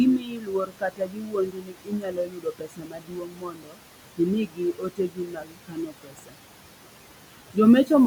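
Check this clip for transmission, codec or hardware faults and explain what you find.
The faults come from noise suppression, not from transmission or hardware. The room noise, sitting about 14 dB under the speech, is part of the recording.

Noise suppressor artifacts run through the whole clip. The background sinks between phrases, because frame-by-frame band gating cuts steady noise by about 18 dB.

Speech cut by the noise suppressor occurs from 0.06 to 3.8 s and again from 4.45 to 6.36 s. Quiet syllables and word endings sound swallowed, for about three seconds and then about a second and a half, dropping by up to about 19 dB, because the suppressor mistakes them for noise.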